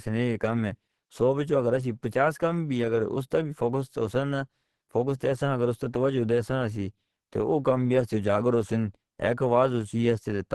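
From start to finish the speech has a muffled, hoarse quality, and nothing is left above 12.1 kHz. That points to likely Opus compression at a low bitrate, around 16 kbps, running in its hybrid speech mode. The damage is plainly audible as roughness and graininess rather than the swirling, watery holes of MP3, because Opus fills starved bands with noise or folded copies instead of leaving them empty.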